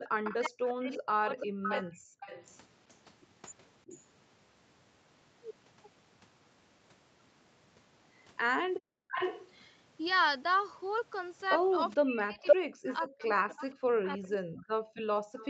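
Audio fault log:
0.00–2.12 s, 3.85–3.96 s, 12.02 s to end: speech suppressed in double talk. The speech dips or cuts out, by as much as about 40 dB, only about 15 dB at 3.9 s, likely because the echo canceller ducked both talkers during overlap.
0.00–2.54 s, 9.11–9.51 s, 12.46–15.48 s: echo leak. A delayed copy of the speech trails it by 428 ms, then 517 ms, about 5 dB below the speech at first and about 5 dB above it in the last stretch, likely loudspeaker pickup the canceller failed to remove.
8.80–9.11 s, 15.11–15.35 s: background gated by the echo canceller. Room sound drops out by about 40 dB for roughly a third of a second, then a brief moment, as the canceller clamps the microphone during playback.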